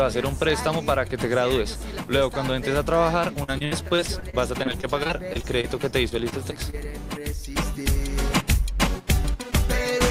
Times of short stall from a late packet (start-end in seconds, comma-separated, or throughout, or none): 6.70-6.85